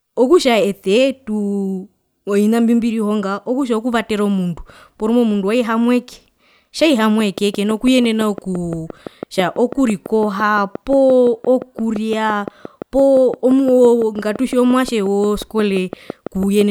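Speech with a steady ticking from 7.2 s to 16.6 s: a train of clicks, about fifty, regularly spaced at 5.8 per second and well above the speech, likely interference from nearby equipment.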